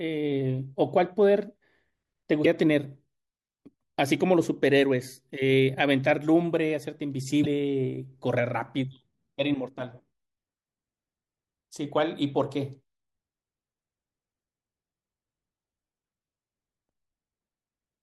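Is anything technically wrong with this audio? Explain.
Yes. At 2.44–2.47 s and again at 7.43–7.46 s the speech jumps forward and a brief glitch, about one 24 ms frame long, replaces it. This is likely a broken MP3 bit reservoir: frames were dropped from the stream, so the next frame reached back into the reservoir for its borrowed data and decoded bytes from a different frame. The sound skips ahead and the first frame after each cut comes out garbled.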